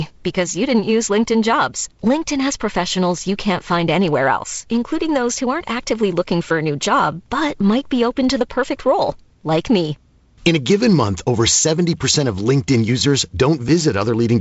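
No technical faults are audible.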